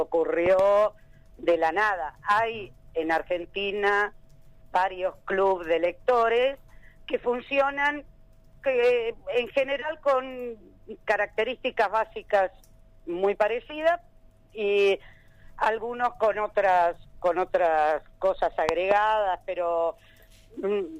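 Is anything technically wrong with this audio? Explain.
Yes. There are two loud pops, each heard as a pair of sharp thumps: one from 0.46 to 0.61 s, peaking about 15 dB above the sound, and another from 18.69 to 18.93 s, at about 20 dB. The likely cause is a sudden voltage step from a plug, switch, static discharge or driver glitch. The downstream circuitry shapes each step into a pulse, and the sound carries on beneath both events.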